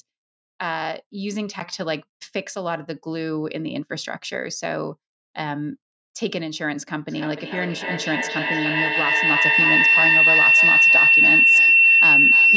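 From 7.09 s to the end at 12.56 s, a piercing tone near 3 kHz swells out of the speech, with the loop repeating roughly every 0.3 s and the tone peaking at about 11 dB above the talker. It is feedback howl: two devices on the same call share a room, so the loudspeaker's output re-enters the microphone with net gain on each trip. The repeats grow instead of fading, narrowing onto the frequency the loop favours.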